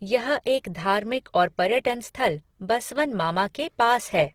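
Opus compression, throughout: the speech sounds grainy and rough, likely from Opus music mode at a rate fitting 16 kbps, filling bit-starved bands with folded energy or noise.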